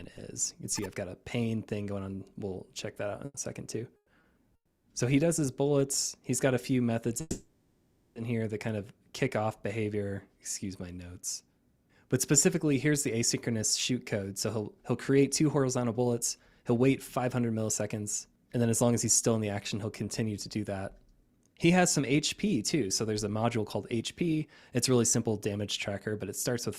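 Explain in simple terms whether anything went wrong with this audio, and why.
Yes, several things went wrong, all from packets of audio arriving unevenly over the network.

Short stall from a late packet: twice, at 3.25 to 3.36 s and 4.21 to 4.25 s, a packet arrived late, so the receiver stretched the last bit of sound to cover the wait, and the sound is held slightly too long before continuing.

Call audio freeze: at 3.96 to 4.09 s, 4.55 to 4.86 s and 7.21 to 8.18 s the sound hangs, then fades into a brief near-silence. Likely the packets were held up along the way. Each time the audio resumes where it stopped, nearly a second late in the last case.

Jitter buffer speed-up: from 12.76 s to 26.50 s the receiver trimmed tiny slices to catch up on that built-up delay. The audio runs about 7% fast at the same pitch, losing roughly a second overall, and can feel slightly hurried.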